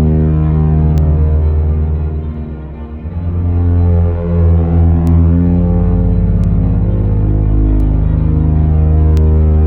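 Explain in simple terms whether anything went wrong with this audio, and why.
Sharp ticks run through the music from 0.98 s to 9.17 s, about every one and a half seconds. These are word clock ticks: two unsynchronised digital clocks slipping a sample.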